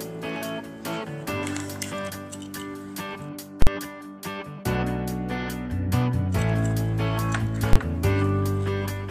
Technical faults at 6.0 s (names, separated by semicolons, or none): none